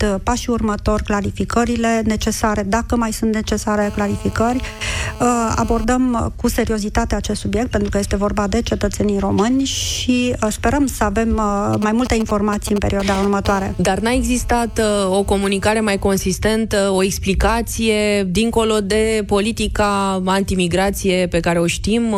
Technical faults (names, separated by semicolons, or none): GSM phone buzz; GSM signalling bursts